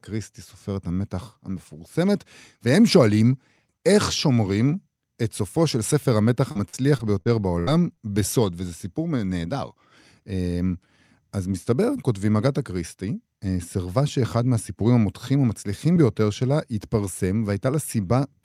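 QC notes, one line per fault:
6.51 to 7.99 s, repeated packet loss (robotic sound). The speech breaks up six times in under a second and a half. About 240 ms of audio goes missing, and about 235 ms of that is patched by stretching the last sound forward. The longest hole lasts 74 ms. Roughly a sixth of the stretch is filled-in sound. Because each patch repeats what came before, the voice turns choppy, with small pieces dropped.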